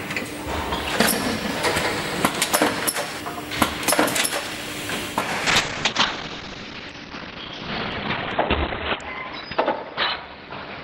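At 5.47 s a call bitrate drop sets in and lasts to the end: the encoder falls from 96 kbps to 10 kbps, coding coarsely and rough-sounding, with bandwidth cut from 20 kHz to 4 kHz. On a spectrogram, energy above 4 kHz vanishes.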